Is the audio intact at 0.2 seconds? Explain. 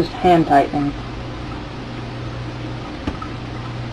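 Yes, at 0.2 seconds the audio is intact, with nothing there that breaks up, drops out or distorts the sound.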